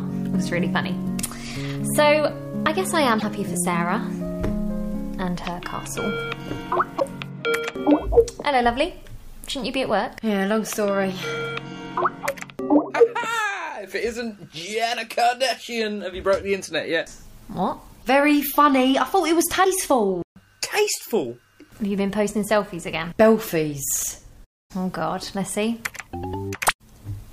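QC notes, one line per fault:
3.18–3.23 s, 6.96–7.02 s and 19.63–19.66 s: damaged data in a compressed stream. Three brief disruptions break the flow of the audio, the first two about 56 ms each and the last about 27 ms. Part of the compressed stream is corrupt at these points, so the decoder misreads or rejects the affected frames, loses sync and searches for the next valid frame header before playback can continue.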